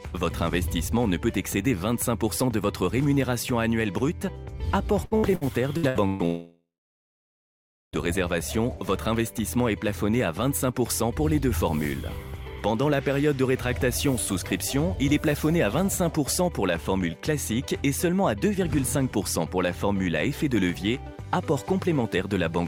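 From 5.05 to 6.22 s the audio turns choppy, with six short holes, the longest about 126 ms, smoothed over by stretched fragments covering roughly a third of that span. This is repeated packet loss: packets kept going missing, and each hole was patched by extending the preceding sound.

Right after, from 6.25 to 7.96 s, the sound smears into a fading buzz and then about 1.3 s of near silence before resuming with that stretch absent. A long network dropout is the likely cause, with the receiver extending the last sound until nothing remained.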